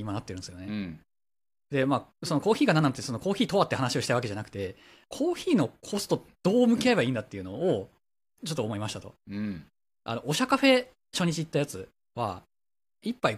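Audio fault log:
Nothing to log here: the speech comes across with no audible faults anywhere in the clip.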